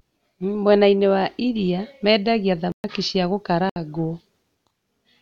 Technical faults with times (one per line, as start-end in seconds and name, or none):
2.72-2.84 block of digital silence
3.69-3.76 block of digital silence